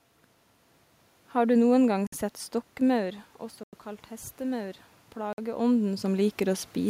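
A speech recording with two kinds of technical fault. Three short dropouts cut the audio to silence: at 2.07 to 2.13 s, right after "du noen gang", for 56 ms; at 3.63 to 3.73 s for 94 ms; and at 5.33 to 5.38 s for 51 ms. Each gap is followed by the sound resuming, which points to a Bluetooth stall: interference likely delayed packets long enough for the headphone buffer to empty, and playback waited for the retransmissions before continuing.

The second fault is automatic gain rising, running from 2.91 s to 6.85 s. The level reaching the microphone falls by about 10 dB around the point where the talker moves away at roughly 3 s, and the gain control responds by slowly adding about 7 dB. Because the boost is applied to the whole signal, the room noise swells along with the voice over those four seconds instead of staying at a steady floor. The later change in the talker's position near 5.5 s is a natural level shift at the microphone.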